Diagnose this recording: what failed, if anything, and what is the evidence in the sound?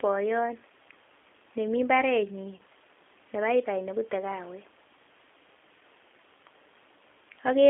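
The codec stage is a G.729 speech codec at 8 kbit/s. The speech is confined to about 250 Hz to 3.5 kHz and sounds plainly rough and synthetic throughout.

On the network side, VoIP packet loss was concealed by the speech codec. About 20 ms, which fits one lost packet, from 2.57 to 2.61 s, is replaced by sound extrapolated from the last frame that fades.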